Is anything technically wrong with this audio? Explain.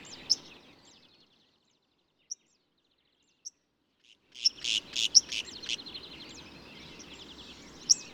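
Yes. From 4.12 to 4.68 s there is zipper noise. The level changes by roughly 25 dB, but in discrete jumps of 3 dB, about fifteen a second, with no smoothing between them. Each jump is a small discontinuity in the waveform, so a fast ticking, zipping texture rides on the sound while the level moves. A clean fade glides without any ticks. Here each step makes a small click.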